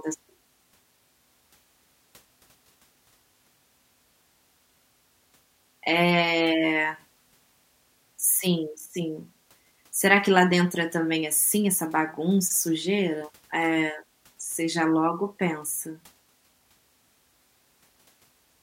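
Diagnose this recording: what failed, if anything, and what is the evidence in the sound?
No fault is audible.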